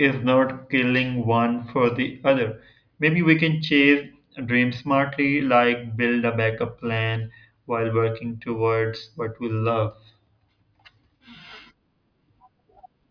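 Nothing goes wrong in this stretch of speech: there's no dropout, glitch or other technical fault to point to anywhere along the way.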